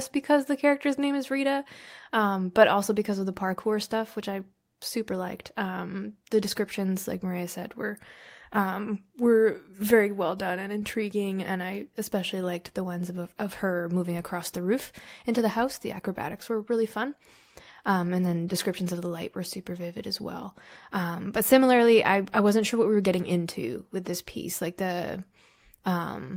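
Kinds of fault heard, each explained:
No technical fault can be heard anywhere in the speech recording, with level, continuity and frequency balance holding steady throughout.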